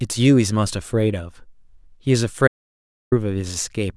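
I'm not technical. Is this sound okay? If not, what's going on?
No. There is an audio dropout to silence. At 2.48 seconds the speech cuts out completely. It comes back at 3.12 seconds. That gap is dead silence, with no background hiss or room sound at all. About 0.64 seconds of speech is simply missing. The cause is likely a brief loss of the input, such as a loose connection or an accidental mute. The recording kept running and filled the gap with nothing.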